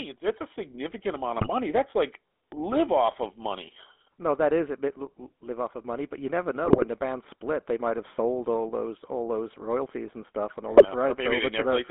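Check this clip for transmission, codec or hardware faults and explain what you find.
Yes, there's a fair bit going on here, all of it phone-line trouble plus one playback hiccup.

GSM full-rate codec, throughout: the whole speech clip sits in a roughly 250 Hz to 3.5 kHz band. Pulse-driven vocal-tract modelling leaves that buzzy, gravelly roughness, which fits 13 kbps full rate.

GSM bit errors, 1.36–1.53 s after "it's a significant amount", 6.64–6.85 s between "money but you never" and "the band split they", and 10.72–10.88 s: corrupted filter, pitch or gain values garble the frames into squawks, pops and gargling.

Repeated buffer, 1.90–1.92 s, just before "like live off of": one chunk gets played twice with a hard join, so you hear a quick click or buzz, which fits a 20 ms buffer.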